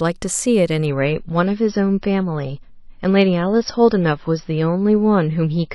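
At 0.85 s the stream falls back to a lower-bitrate version, as adaptive streams do when the connection slows, and it stays there until the end. The switch is abrupt and gapless: the speech loses its top end, with nothing above about 5.8 kHz, and the remaining band picks up swirly, watery codec artefacts. The narrowing fits a drop from roughly 128 kbit/s MP3 to around 24 kbit/s.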